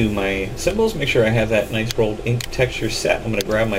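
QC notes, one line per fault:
Nothing stood out on listening to the audio.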